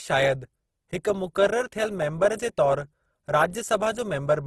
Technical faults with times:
0.00-4.47 Opus compression

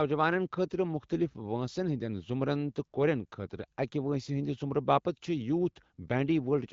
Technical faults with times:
none

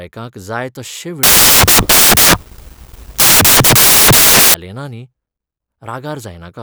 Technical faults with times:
1.23-4.54 samples built from the wrong bytes

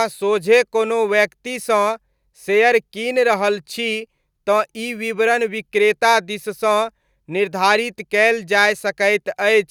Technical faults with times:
none

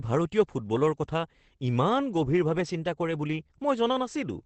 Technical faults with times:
0.00-4.45 Opus voice compression

